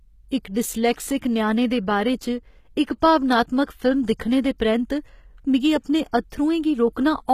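From start to finish, the speech carries plainly audible codec damage that points to HE-AAC compression, likely at a very low bitrate, which fits something around 20 kbps. Nothing is present above 14.9 kHz. The treble that remains sounds synthetic, as if it were rebuilt by copying lower bands upward rather than coded directly. Its harmonics do not line up with those below the crossover, so s sounds come across gritty, metallic and lispy.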